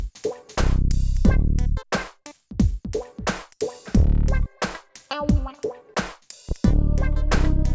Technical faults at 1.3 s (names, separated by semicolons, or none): none